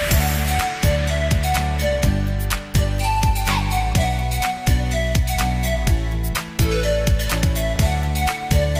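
From 3.25 s to the end, a crude rate conversion sets in. Samples were repeated to reach a new rate with no smoothing filter, which fits a jump from 44.1 kHz to 48 kHz. The stepping error, roughly 25 dB below the signal, is heard as a gritty, inharmonic fizz riding on louder and brighter passages. On a spectrogram, faint spurious lines and haze appear that don't line up with the real partials. Zoomed in, the waveform shows tiny staircase steps.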